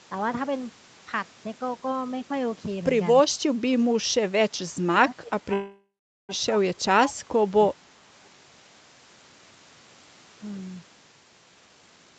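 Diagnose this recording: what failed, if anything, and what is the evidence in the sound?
Call processing: the speech ducks by about 20 dB in patches between 4.78 and 7.50 s, and by about 15 dB at 7.69–7.90 s, likely speech suppressed in double talk by the echo canceller.

Network/jitter buffer: from 5.53 to 6.32 s there's a call audio freeze, a fading fill then 420 ms of silence, likely late packets, with the speech resuming without loss.

Jitter buffer: from 11.67 s to the end the speech rushes at 155% speed, same pitch. That's jitter buffer speed-up trimming out about 300 ms to cut the delay.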